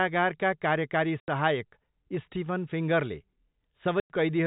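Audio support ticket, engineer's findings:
Packet loss filled with silence, 1.2 to 1.28 s: 80 ms dropout, hard-edged. Receiver played silence for missing packets; gap length fits 20 ms packets. Probable component: network path or jitter buffer. Second hole at 4.0 to 4.1 s, 100 ms, same hard edges, same 20 ms multiple. The surrounding audio is band-limited below 4 kHz, consistent with the G.711 mu-law leg at 64 kbps.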